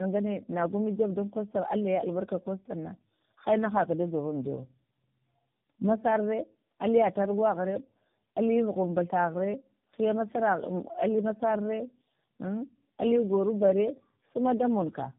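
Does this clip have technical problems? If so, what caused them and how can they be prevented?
Yes. Throughout the clip the speech sounds rough, dull and warbly, with nothing above 3.6 kHz. This points to tandem speech coding: the signal seems to have passed through three low-rate speech codecs in a row, fitting an AMR-NB, G.723.1, AMR-NB chain joined by G.711 links. Each coder re-encoded the previous one's degraded output, so the errors stacked up. Prevention: pass the coded speech through unchanged between networks, or transcode only once.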